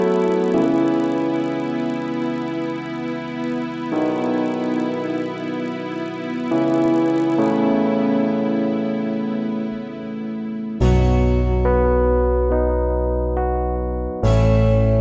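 From 0.0 to 7.6 s, the resampler restarted on every block, which fits a 48 kHz to 16 kHz conversion run in 20 ms blocks. Each block edge leaves a small error, producing a 50 Hz buzz. Unlike mains hum, it sounds only with signal.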